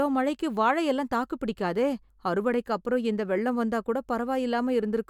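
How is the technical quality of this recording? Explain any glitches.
No glitches can be heard anywhere in this recording.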